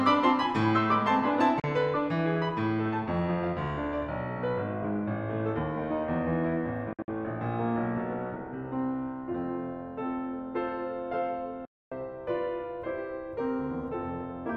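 Packets on the wireless link to the headphones are arriving too late and being discarded, most likely a Bluetooth dropout, so the music cuts to silence and resumes further along as if it had kept playing. A brief 37 ms hole comes at 1.60 s. From 6.93 to 7.08 s, several short gaps break up the sound, the longest 56 ms. The worst is a 261 ms silence from 11.65 to 11.92 s.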